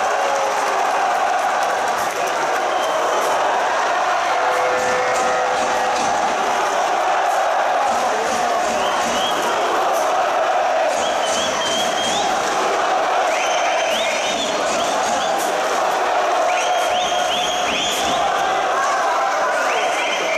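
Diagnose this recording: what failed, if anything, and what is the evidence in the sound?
Nothing failed here, as far as I can hear: every stage from the wiring through to playback seems to have done its job, and there's no sign of trouble anywhere in the sound.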